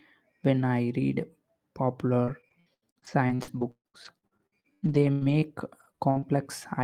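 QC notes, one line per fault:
2.25–6.24 s, repeated packet loss (robotic sound): the speech breaks up into a choppy run as some 27 short dropouts arrive in quick succession, the longest about 137 ms. Each hole is bridged by stretching the last intact fragment, so roughly 28% of the span is concealed, about 1.1 s in all, and only around half a second of it rebuilt. The repeated stretches produce the mechanical texture.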